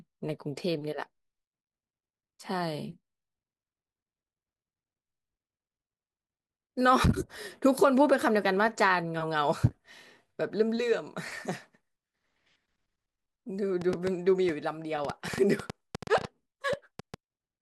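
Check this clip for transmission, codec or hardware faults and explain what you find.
One hardware-type fault is present: a train of clicks from 13.81 to 17.15 s. Something is injecting short pulses into the signal path, likely interference from nearby equipment or a faulty connection or power supply. The pulses arrive at about 5.7 per second but at an uneven pace, roughly twenty in all, each with much the same shape and peaking about 10 dB above the speech. They are heard as irregular ticking over the speech and in its pauses.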